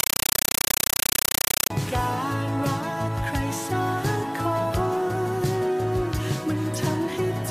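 From 0 to 1.70 s the sound is replaced by very loud, harsh static that chatters about 31 times a second, each burst roughly 8 ms of noise then silence. This is a compressed stream played as audio: an AC-3 bitstream, fitting 384 kbps, sent out undecoded as raw samples.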